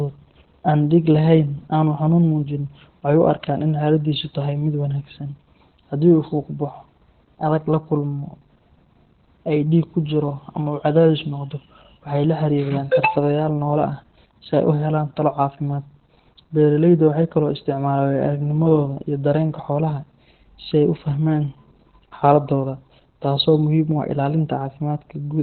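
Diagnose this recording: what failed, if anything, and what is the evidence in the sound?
The codec stage failed: the speech went through Opus voice compression at a very low rate, running in its SILK linear-prediction mode with the band cut to narrowband. Nothing reaches above about 4.3 kHz for the whole clip, which fits a rate around 8 kbps. With so few bits, the excitation is coded coarsely, so the speech sounds muffled, hoarse and slightly robotic throughout, with heavy codec damage.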